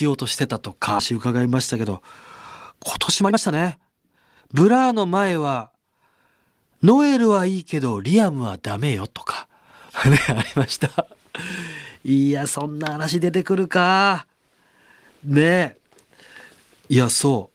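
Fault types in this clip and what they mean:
skip ahead: About a second of speech was discarded while later audio waited, so playback jumps forward at 1.0 s, joined with no gap.
jitter buffer speed-up: Excess buffered audio is trimmed in pitch-period pieces, so speech hurries at unchanged pitch, running 108 to 122 percent speed between 1.1 and 5.2 s.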